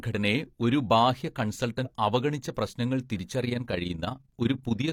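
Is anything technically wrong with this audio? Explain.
Yes, two problems. Right after "ഒരു ബാഹ്യ", from 1.81 to 1.88 s, there's damaged data in the compressed stream: the decoder loses frame sync and spits out a short glitch before recovering.

From 3.41 s to the end there's overlap-add ripple. The reassembled frames don't sum to a flat gain, so the level pumps by about 11 dB at around 20 Hz, giving a rough flutter.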